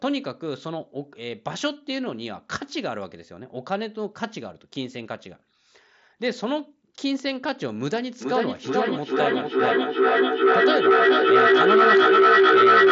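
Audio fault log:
8.21 to 12.91 s, feedback howl: two devices in one room form a microphone-to-loudspeaker loop that gains level on every trip, so repeats grow instead of fading, narrowing to a tone near 400 Hz that pulses about every 0.4 s and climbs to about 10 dB above the speech until the clip ends.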